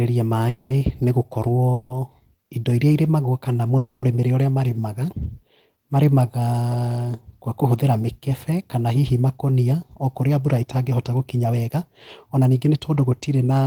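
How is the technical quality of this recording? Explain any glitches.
The recording has two kinds of glitch: three call audio freezes early on and two jitter buffer speed-ups near the end.

The call audio freezes fall at 0.49 to 0.73 s, 1.73 to 1.93 s and 3.77 to 4.05 s. Each time, the last sound carries on as a fading buzz or hiss, for about 210, 170 and 250 ms. The speech then resumes where it stopped, with nothing lost. Delayed packets likely emptied the jitter buffer.

The jitter buffer speed-ups run from 10.21 to 11.75 s and from 12.31 to 13.05 s. The speech plays about 11% and 10% faster at unchanged pitch and sounds hurried. The receiver cut tiny pitch-period pieces to shed backlog, roughly a fifth of a second and then well under a tenth.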